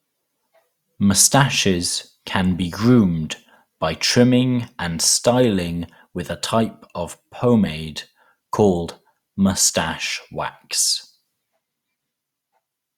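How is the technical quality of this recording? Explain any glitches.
No technical faults can be heard anywhere in the recording, so there are no glitches to explain.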